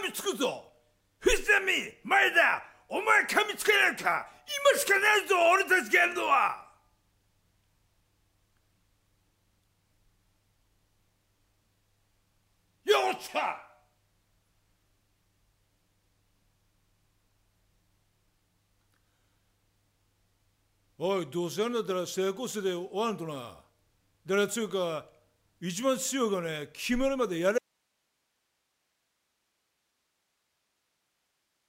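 An audio dropout to a faint residue runs from 27.58 s to the end: the signal cuts abruptly to hiss around 50 dB down, likely a lost feed into a live path.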